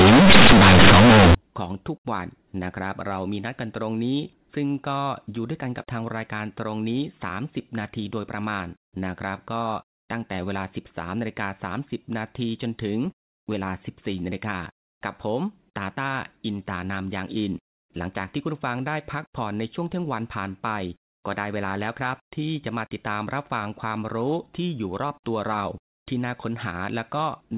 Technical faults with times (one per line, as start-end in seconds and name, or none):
0.00-1.35 companded audio read as linear